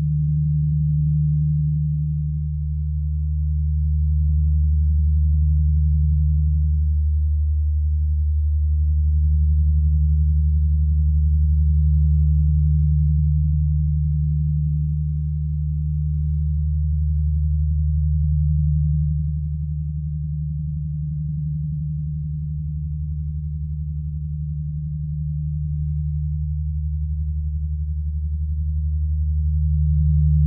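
No technical faults can be heard anywhere in the recording. Nothing in this run of sounds marks a moment where the audio path went wrong.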